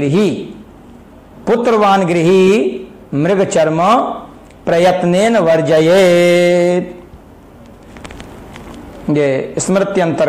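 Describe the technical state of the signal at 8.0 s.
Nothing goes wrong with the signal at 8.0 s; the audio is intact at that moment.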